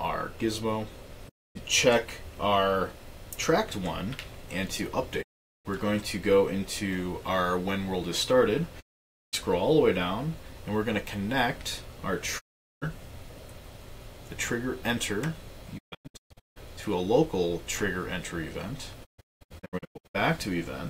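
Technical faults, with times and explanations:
1.28 to 1.57 s, 5.21 to 5.67 s, 8.80 to 9.35 s, 12.38 to 12.84 s: digital broadcast dropout. Sound fades out over 20 ms and goes silent. The receiver mutes until good frames return.
15.77 to 16.58 s, 19.04 to 20.16 s: digital broadcast dropout, split into several short holes, longest 160 ms and 192 ms. Frames arrive intermittently, so the sound stutters.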